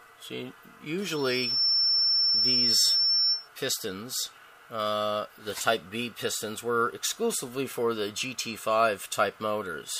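A loudspeaker feedback squeal hits from 1.02 to 3.49 s: a single tone at 5.4 kHz swells up over roughly the first 0.7 s and ends up sitting about 5 dB above the rest of the audio. The mic was hearing its own speaker, and the loop gain crossed unity at that frequency.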